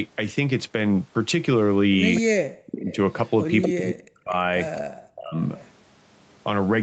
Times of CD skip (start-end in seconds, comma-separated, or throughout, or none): none